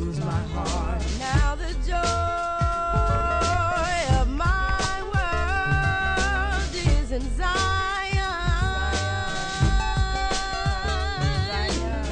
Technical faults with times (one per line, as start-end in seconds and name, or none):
none